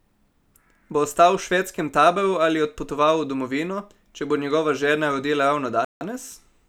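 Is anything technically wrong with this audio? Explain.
Yes. At 5.85 to 6.01 s, after "njegova žena rodila", the speech drops to silence for about 164 ms, then resumes. This is likely a Bluetooth stall, where interference delayed packets and the receiver's buffer ran empty.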